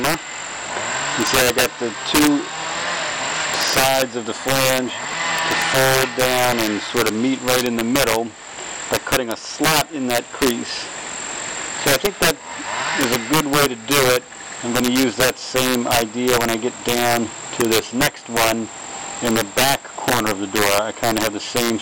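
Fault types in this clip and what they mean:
Integer overflow: peaks driven about 8 dB past full scale wrap to the opposite sign instead of clipping, giving harsh cracks on a small fraction of loud samples.
GSM signalling bursts: a nearby 2G phone's radio bursts are rectified by the audio circuit, producing a galloping 217 Hz tick-buzz pattern around 15 dB down from 4.56 to 5.61 s.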